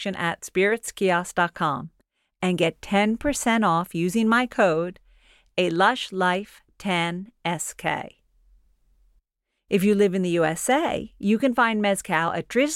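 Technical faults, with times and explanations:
No technical faults can be heard anywhere in this speech recording.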